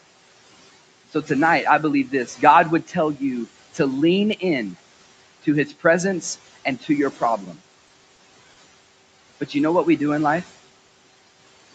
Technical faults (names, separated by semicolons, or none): noise suppressor artifacts; speech cut by the noise suppressor; short stall from a late packet